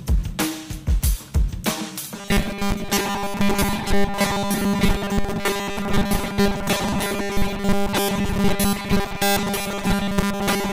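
From 2.15 s to the end, robotic sound from repeated short buffers: a rigid 200 Hz buzz, likely a 5 ms chunk looping over most audio, showing as evenly spaced spectrogram harmonics.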